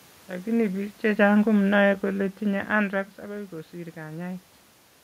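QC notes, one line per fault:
1.27–2.58 s, automatic gain falling: the automatic gain control judged the input too loud or its background noise too strong and lowered its gain by about 3 dB, so speech and room noise sink together before "anthrax akoi", unlike the talker moving near 2.5 s, which shifts only the voice.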